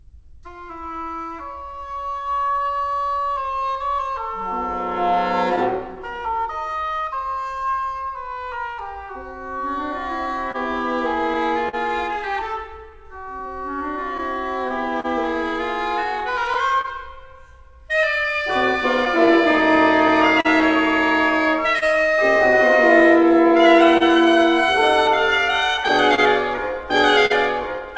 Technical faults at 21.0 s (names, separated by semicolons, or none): clock drift between sender and receiver; repeated timing corrections; scattered short gaps